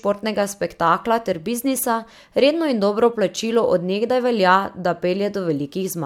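No technical fault can be heard anywhere in the speech recording.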